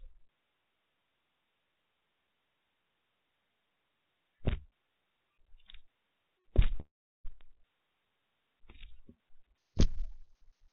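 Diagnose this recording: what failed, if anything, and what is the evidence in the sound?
Bit error spike, digital storage or link stage: isolated sharp ticks at 4.49 s and 7.41 s, where one or two flipped bits jump the sample value by a power of two.

Call audio freeze, network stage: from 6.80 to 7.27 s the last sound smears into a fading buzz, then about 0.35 s of silence, likely from jitter-buffer underrun. Audio resumes intact.

Section at the wrong speed, playback stage: from 9.58 s to the end the audio runs 1.75 times fast, about ten semitones higher, likely from a clock mismatch.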